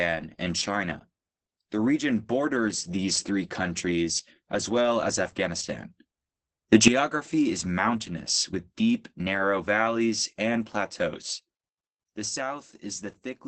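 Opus voice compression affects the speech throughout. The coder runs in its SILK linear-prediction mode at wideband, so nothing above 8 kHz survives, and the excitation within the 20 ms frames is coded coarsely. The damage is heavy: the speech is muffled and hoarse with a slightly robotic edge, which fits a very low bitrate of around 10 kbps.

At 6.73 s a sudden gain jump raises the speech and the background noise together by about 12 dB. About 0.15 s later, at 6.88 s, the level drops back just as abruptly. At 11.22 s a second step cuts the level by about 7 dB, and it stays down to the end. Both steps happen from one sample to the next with no fade, most likely a gain setting applied without a ramp.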